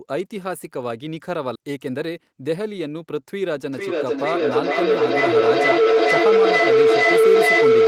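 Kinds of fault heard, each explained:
Skip ahead: at 1.55 s the speech jumps forward with no gap, about 0.4 s of it simply gone and the two sides butted together, because audio was discarded in transit or by an overflowing jitter buffer while later audio was already queued.
Jitter buffer speed-up: from 1.69 s to 3.05 s the speech runs about 9% fast at unchanged pitch and sounds hurried, as the receiver repeatedly trimmed short pitch-period pieces, roughly 0.15 s in total, to drain a jitter buffer holding more audio than its target.
Feedback howl: from 3.73 s to the end a tone near 500 Hz builds, with a loop delay of about half a second, peaking around 9 dB above the speech, because two devices on the call share a room and the microphone-to-loudspeaker loop gains level each trip.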